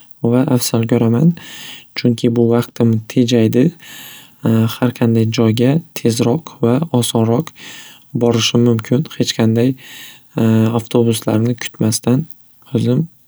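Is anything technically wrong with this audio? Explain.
No, nothing technically wrong can be heard in this speech recording.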